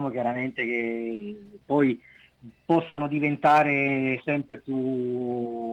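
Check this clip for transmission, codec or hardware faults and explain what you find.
The clip has transmission faults from lost packets: two brief concealed gaps and one longer burst.

Short concealed packet loss occurs at 1.15–1.21 s and 4.49–4.55 s. Each time, 40 ms of audio arrived too late. The receiver extended the preceding sound to fill it, heard as a brief smear.

A burst of packet loss runs from 2.89 to 2.99 s. About 80 ms went missing. The last sound was stretched into a fading buzz or hiss, and the audio resumes with that stretch lost.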